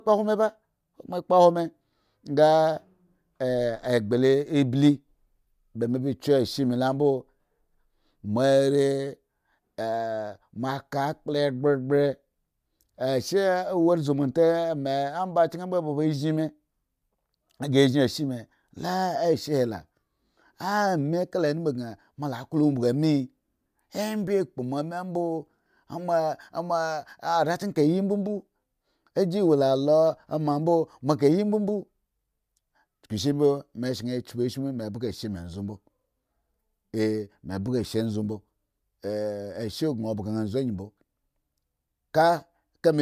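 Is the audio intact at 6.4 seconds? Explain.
Yes, the speech at 6.4 seconds plays through intact, with no fault at that moment.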